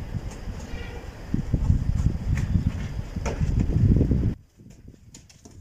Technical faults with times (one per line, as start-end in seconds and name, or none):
4.34-5.61 one channel inverted